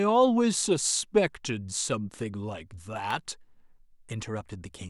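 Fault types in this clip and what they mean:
Electrical switching spike: At 3.10 s there's a sharp snap or tight cluster of clicks, only a few milliseconds long, sitting on top of the speech and peaking somewhere around -20 dBFS. It's a very short burst of energy unrelated to the talking, which is most likely a nearby switch, motor or bit of static discharge arcing and getting picked up by the audio line.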